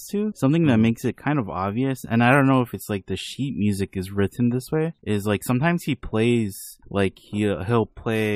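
Nothing in the speech stood out as a technical fault on listening.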